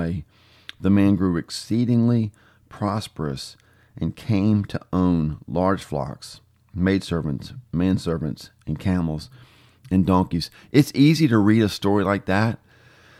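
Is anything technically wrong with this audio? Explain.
No, I hear no technical fault in this recording.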